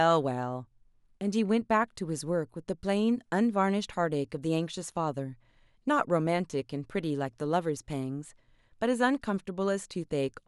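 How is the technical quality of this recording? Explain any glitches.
There are no glitches to explain in this speech recording. No dropouts, clicks or other technical faults can be heard at any point.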